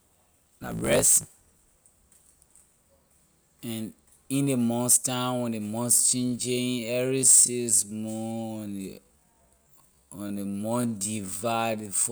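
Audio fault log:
0.00–1.63 s, block size mismatch (truncated): the speech opens with a steady buzz at about 54.4 Hz and runs 1.16 times too fast, with pitch roughly normal. One stage writes blocks longer than the next reads, so the tail of each block is discarded, which fits 1024-sample blocks. On a waveform, hard discontinuities repeat every 18 ms or so. A spectrogram shows evenly spaced vertical seams at that rate over the speech.
5.78–12.11 s, time-stretched section: after "months time when ley", the pace drops abruptly to 0.581 times normal while pitch stays put, leaving the speech dragging through "six month when a" and on to the end. The likely cause is software lengthening the audio by repeating short pieces to keep pitch fixed. A spectrogram shows harmonics at unchanged frequencies but drawn out horizontally. The waveform shows near-identical grains repeated back to back.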